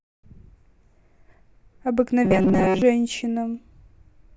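Speech, with robotic sound from repeated short buffers between 2.25 and 2.82 s. There the voice becomes a rigid metallic buzz fixed at 188 Hz that still loosely tracks the speech. The likely cause is audio arriving too seldom, so the same roughly 5.3 ms fragment is replayed in place of most of the real signal, about 70% of it. A spectrogram would show evenly spaced horizontal harmonics at multiples of 188 Hz, and the waveform would show one short shape copied again and again.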